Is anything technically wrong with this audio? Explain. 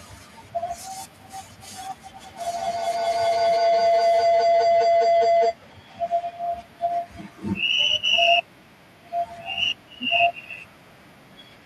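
Yes, there's a feedback howl from 2.2 to 5.62 s. It sounds like two devices in the same room on one call: whatever the loudspeaker plays gets picked up by the microphone and sent round again, louder each pass. Instead of dying away, it narrows onto a tone around 700 Hz that pulses roughly every fifth of a second and peaks about 2 dB above the speech, then cuts off at 5.62 s.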